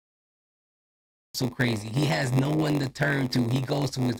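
The recording or stream began late, a cut-off start: from 0.0 to 1.35 s there is only digital silence, and at 1.35 s the sound appears abruptly mid-event, with no natural attack or fade-in, as if the capture had joined something already under way.

Throughout the clip, one stage hands over shorter blocks than the next stage reads, and each block is topped up with zeros. This is a block size mismatch (padded), which fits a 512-sample read block. The repeated short gaps produce a steady buzz at about 93.8 Hz. The audio runs at 0.938 times normal speed but keeps roughly its original pitch.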